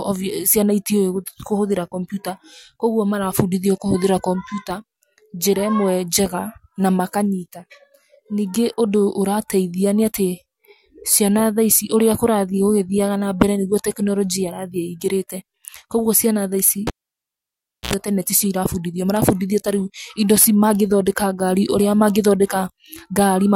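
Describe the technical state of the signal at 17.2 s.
At 17.2 s the line's basically dead: that's the cable pulled and plugged in, running 16.87 to 17.94 s. A pop, about a second of near silence, then roughly 80 ms of 60 Hz mains buzz as the tip touches, and another pop before "tene ti cio".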